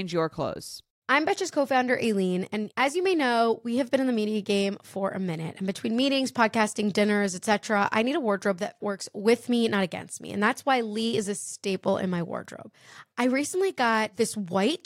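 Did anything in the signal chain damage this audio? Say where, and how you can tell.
No, nothing in the signal chain damaged this audio.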